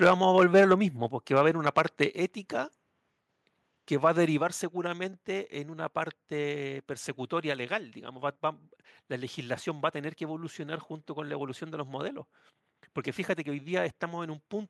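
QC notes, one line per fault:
0.02–0.74 s, 1.36–2.04 s and 4.06–4.08 s, microphone overload: the loudest syllables get a harsh, crackling edge as peak tops flatten, about 6 dB over at the start (roughly 2% of samples), about 4 dB next, about 1 dB last. The likely cause is microphone input driven past the converter's limit.
0.07 s, 1.08 s, 2.1 s and 4.38 s, microphone volume stepped down: voice and background drop abruptly by about 2, 5, 4 and 4 dB, consistent with call software cutting device input gain in single steps.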